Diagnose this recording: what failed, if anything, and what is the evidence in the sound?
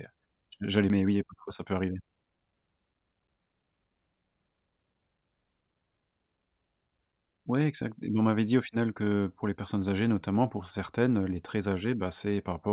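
At 0.9 s the speech jumps forward with no gap and no fill: about a second of audio is simply missing, and the two sides are butted together almost directly. This is a skip ahead at the network and jitter-buffer stage. Audio that arrived late or overflowed the buffer was thrown away while newer audio was already queued, so playback resumed from the later point. Unlike a dropout, there is no silence or concealment sound at the join, only the abrupt jump.

From 1.0 s to 2.46 s the speech runs at about 112% of normal speed while the pitch stays where it was. This is a jitter buffer speed-up in the call processing. The buffer was holding more audio than its target, so the receiver removed short pitch-period-sized pieces many times in a row, about a fifth of a second in total, to bring the delay back down. Resampling or a wrong-clock fault would raise the pitch along with the tempo, but here only the timing changes. 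The hurried stretch follows the skip, within the narrowband G.711 mu-law call sound, which has nothing above 4 kHz.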